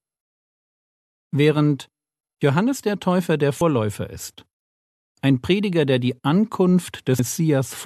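At 3.61 s and 7.19 s, compressed frames are skipped. Whole frames, each 26.1 ms, never play. The speech jumps ahead about a tenth of a second, then about 0.15 s.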